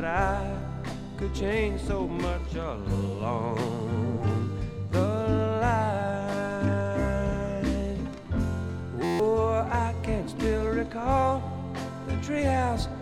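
From 9.04 to 9.20 s a system hang loop freezes playback while the hardware replays one 11.61 ms slice 13 times, which fits a 512-sample buffer. Roughly 150 ms of audio becomes an 86.1 Hz buzz, with identical repeating waveform blocks and evenly spaced harmonic lines on a spectrogram.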